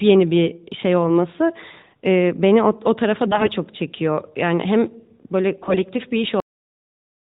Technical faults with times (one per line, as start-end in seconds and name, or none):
3.26-3.50 AMR bit errors
5.62-5.81 AMR bit errors
6.40-7.38 cut-off end